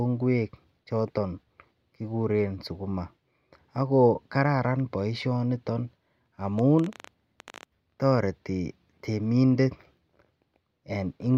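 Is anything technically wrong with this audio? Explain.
Yes. From 6.59 to 7.64 s, just before "toreti temindet", there is a train of clicks. About fifteen sharp, similar pulses arrive unevenly, near 15.4 per second, peaking a few decibels above the speech. Likely cause is interference or a faulty connection injecting pulses. It sounds like ragged ticking over the voice.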